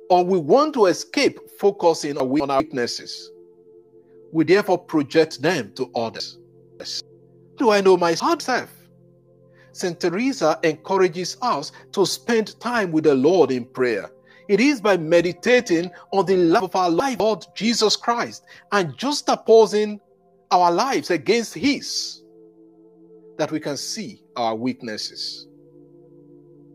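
Chunks out of order occur at 2.2 to 2.6 s, 6.2 to 7.0 s, 7.6 to 8.4 s and 16.6 to 17.2 s. In each, a 200 ms block of audio plays late, after the one, two or three blocks that should follow it (three in both 6 to 8 s events). No audio is lost, but the shuffled sequence creates three abrupt joins per event, heard as a jumbled moment.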